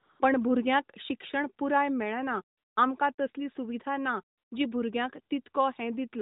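AMR comfort noise fills four pauses in this speech: 0.00 to 0.20 s, 2.58 to 2.76 s, 3.14 to 3.18 s, and 4.38 to 4.52 s, lasting 195, 180, 40 and 140 ms. Each time, the phone judged the talker silent and stopped sending speech frames. The receiver then generated smooth synthetic noise from a rough level-and-spectrum estimate. The real background drops out and a steady hiss switches in and out, band-limited like the narrowband AMR path.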